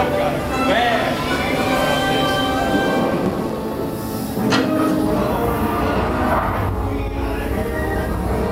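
From 3.11 to 3.53 s there is processor overload crackle: the system repeatedly fails to deliver its short buffers, roughly 5 ms each, and several go out as silence. Unlike one clean dropout, these scattered hard-edged gaps cluster into a brief gritty tearing.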